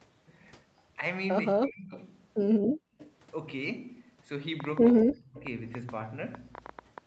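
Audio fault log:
1.54–1.92 s and 5.01–5.42 s: speech suppressed in double talk. The speech dips by about 30 dB, then about 40 dB, likely because the echo canceller muted both overlapping talkers.
1.91–2.04 s, 2.99–3.10 s, 5.37–5.43 s: echo leak. Brief scraps of the speech return 216 ms late, about 25–30 dB down, likely from loudspeaker pickup left uncancelled.
4.60–7.06 s: train of clicks. Similar pulses tick irregularly at about 8.8 per second, peaking about 15 dB above the signal, likely from interference or a faulty connection.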